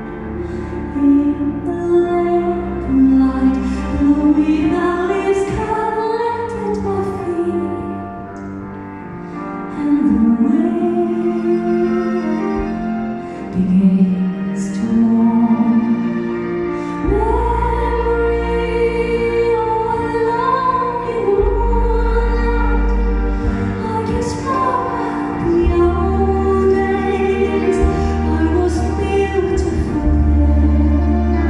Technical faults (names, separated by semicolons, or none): dropped samples